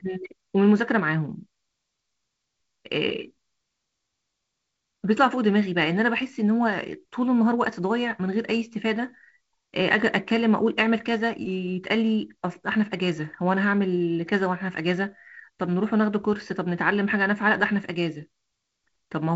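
No technical faults can be heard in the speech. It carries the marks of G.722 wideband telephone coding at what sounds like 48 kbit/s, with nothing above about 7.7 kHz, a light hiss in the upper band and a slightly noisier lower band from the reduced bit allocation.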